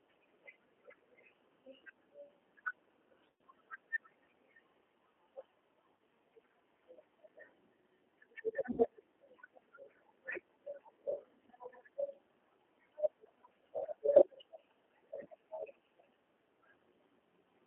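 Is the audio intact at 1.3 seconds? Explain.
No. At 1.3 s, as across the whole clip, the speech carries G.729 codec damage. The codec rebuilds each 10 ms frame from a vocal tract filter, a pitch predictor and a few coded pulses rather than the actual waveform, which fits an 8 kbit/s G.729A stream. The result is plainly audible: a slightly rough, synthetic texture, with the sound confined to the telephone band of about 200 Hz to 3.4 kHz and nothing above it.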